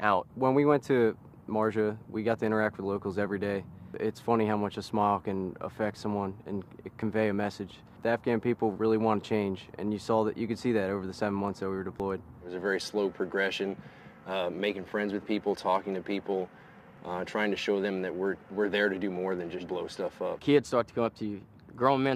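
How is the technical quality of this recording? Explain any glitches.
There are four small skips, at 2.04, 7.02, 12.00 and 16.98 s, spaced almost exactly 5 seconds apart. Each is a jump where a sliver of around 20 ms is gone and the sound on either side butts straight together with no gap. That regular spacing points to audio missing between chunks. The recorder likely handled the audio in 5-second blocks and dropped a bit at every handover, so you hear a tiny hiccup each time.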